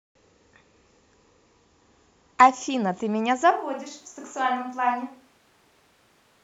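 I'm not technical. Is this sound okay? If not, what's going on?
No. At 3.51 seconds the voice suddenly turns hollow and roomy, thinner in the low end, noticeably quieter, with more background noise, through to the end. This sounds like a switch to a distant microphone, likely because the close microphone dropped out.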